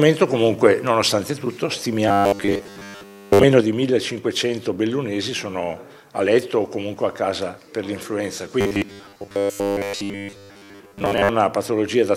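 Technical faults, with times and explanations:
2.08–3.43 s and 8.61–11.29 s, robotic sound from repeated short buffers: the sound turns hard and metallic, riding on a steady 100 Hz buzz while its rough outline still comes through. This is likely caused by new audio arriving too seldom, so the playback repeats the last short slice to fill the gap. Here most of the material is repeated slices rather than fresh audio. A 100 Hz buzz fits a slice about 10 ms long, and that fixed repetition rate imposes its own pitch.
3.61 s to the end, one channel drops out: the sound abruptly becomes quieter, falling by about 6 dB, and stays that way for the rest of the clip. The likely cause is that one side of a stereo feed is lost, leaving the mono sum with only one channel. Material shared by both channels loses half its contribution, which accounts for the drop. Anything carried only in the missing channel disappears completely.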